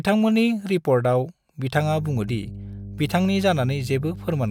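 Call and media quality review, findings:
Mains hum, 50 Hz, from 1.75 s to end of speech clip. Steady low tone with low harmonics, about 15 dB below speech. Probable component: ground loop or nearby transformer coupling power line into capture path.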